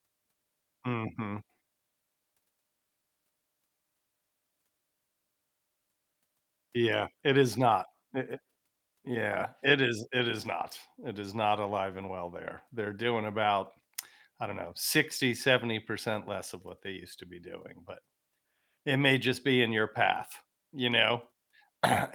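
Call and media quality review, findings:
No technical faults found in the speech signal; capture, processing and playback paths all show normal behaviour.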